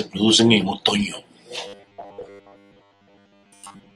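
Audio likely reached the playback software too seldom from 1.67 s to the end, just after "producen en otoño", so the gaps were filled by replaying the last few milliseconds over and over while fresh material was skipped, most of the sound in that stretch being repeats. This is robotic sound from repeated short buffers. Each repeat lasts about 10 ms, which stamps a fixed 100 Hz pitch on the speech and turns it into a stiff metallic buzz that only loosely tracks the words.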